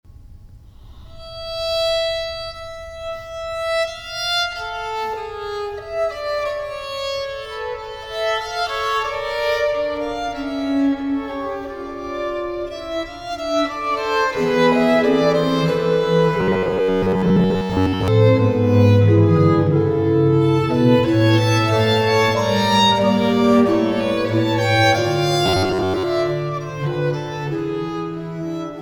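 Audio likely arrived too seldom, so playback looped a short buffer of about 10.7 ms while most of the real signal was skipped. This robotic sound from repeated short buffers imposes a rigid metallic buzz near 94 Hz, from 16.41 to 18.08 s and again from 25.46 to 26.05 s.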